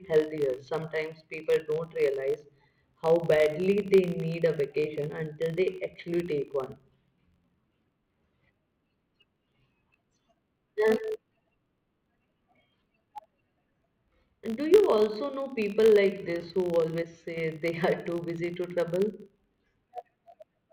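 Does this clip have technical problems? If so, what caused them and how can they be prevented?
Yes. A filter restarted on every block runs through the whole clip: the filter loses its state at each block boundary and starts from silence, so every block opens with a small transient. These repeat 50 times a second, heard as a 50 Hz buzz that rises and falls with the speech level and fades in pauses. On a spectrogram it shows as faint vertical lines every 20 ms and a comb of 50 Hz harmonics under the speech. On a zoomed waveform there are small kinks at regular 20 ms spacing. Carrying the filter's internal state from one block to the next prevents this.

One channel drops out from 17.02 to 17.37 s, between "this who" and "they are too busy". For about a third of a second the level falls abruptly by about 6 dB and then returns just as suddenly. That is the signature of losing one side of a stereo pair before a mono sum, which is the likely cause. 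On the waveform the envelope steps down to roughly half its height with sharp edges at both ends. On the spectrogram a band across all frequencies turns uniformly darker. Monitoring both channels for continuity, and securing cables, connections and routing, prevents the dropout.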